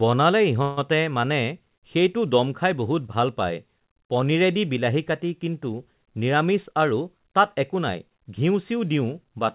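From 0.62 to 0.79 s, just before "মানে সেইটো ডম খাই", there is a call audio freeze: the preceding sound is stretched into a fading buzz for about 150 ms instead of moving on. This is likely the jitter buffer running dry while packets were held up in transit; the receiver filled the wait by continuing the last sound. No audio is lost and nothing drops to silence. When the packets arrive, playback resumes where it stopped, leaving everything after it about 150 ms later.

From 6.52 to 8.39 s, a jitter buffer speed-up plays the speech about 8% fast with its pitch unchanged. The buffer had built up more delay than it targets, so the receiver trimmed repeated short slices, each a pitch period or a few long, adding up to roughly 150 ms. The result is a hurried delivery through that stretch. Across the clip, the band limit at 4 kHz fits a 64 kbps G.711 mu-law call path.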